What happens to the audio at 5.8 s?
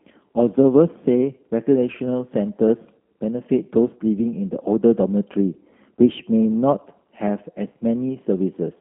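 At 5.8 s the speech carries G.729 codec damage, present throughout the clip rather than at that moment alone. The line is confined to about 200 Hz to 3.4 kHz, and each 10 ms frame is rebuilt from a vocal-tract filter, pitch predictor and sparse pulses, giving a plainly rough, synthetic timbre consistent with an 8 kbit/s G.729A stream.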